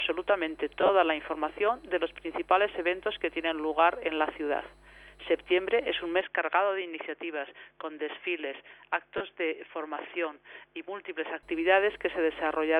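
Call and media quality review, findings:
Lost LE Audio frames, 0.81–0.90 s and 9.18–9.21 s. First event: about 50 ms missing, scattered across 80 ms, longest gap around 30 ms. Second: 30 ms missing. The LC3 decoder conceals each gap by repeating the previous spectrum with randomised phase signs, so tonal content smears into brief noisy patches rather than dropping out. The gaps fit 10 ms frame loss on the Bluetooth link.

Input switched to a poorer device, 6.21–11.43 s. The band abruptly closes off above 3.5 kHz, level drops about 5 dB, and a new noise floor appears about 50 dB below the signal. There is no silent gap at the transition, and full bandwidth returns at 11.43 s. This is likely a mid-call route change to a narrower capture path, such as a headset call profile or a secondary microphone. Light lossy compression throughout.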